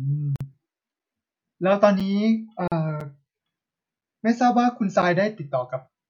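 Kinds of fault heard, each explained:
Gap at a join of encoded pieces: separately encoded segments were butted together with their encoder start delay and end padding left in, so the speech stops dead for about 47 ms and 42 ms. On a waveform these show as flat holes with smeared edges, and a spectrogram shows blank vertical strips.
Gap between chunks: the speech arrives in 1-second chunks with a short silence inserted at each boundary, roughly 7 ms each, falling near 1.0, 2.0, 3.0, 4.0 and 5.0 s. They read as regularly spaced notches in the waveform and thin empty columns across a spectrogram.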